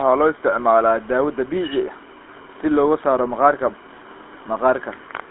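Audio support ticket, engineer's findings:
GSM full-rate codec damage throughout. Speech buzzy and gravelly, band limited to roughly 200 Hz to 3.5 kHz. Fits a 13 kbps GSM full-rate stream: pulse-excited vocal tract model, coarse excitation. Room noise about 34 dB below speech.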